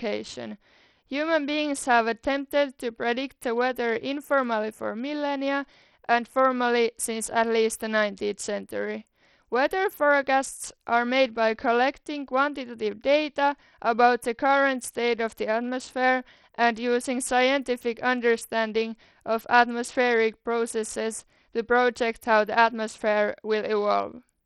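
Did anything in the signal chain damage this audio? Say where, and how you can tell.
Yes, at the codec stage: likely Bluetooth SBC compression starved of bits, fitting about 64 kbps. Treble flickers away and gritty aliasing coats the speech throughout.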